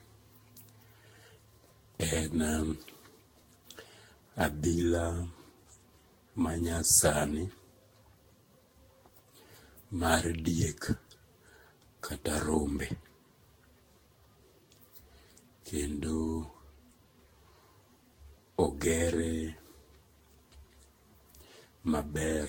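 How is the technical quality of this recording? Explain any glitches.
The speech is degraded by generation loss for the full length of the recording. It sounds swirly and hollow, with consonant attacks smeared, and nothing is heard above about 16.7 kHz. The likely cause is the audio being decoded and re-encoded with a lossy codec around ten times, with the character pointing to Vorbis near 60 kbit/s. Each pass quantises on a shifted frame grid, so the noise and spectral gaps pile up.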